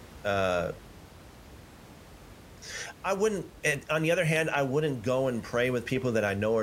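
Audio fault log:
No faults heard in this speech recording.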